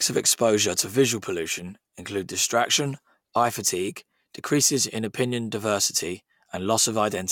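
No technical faults can be heard anywhere in the recording; the signal stays continuous and steady throughout.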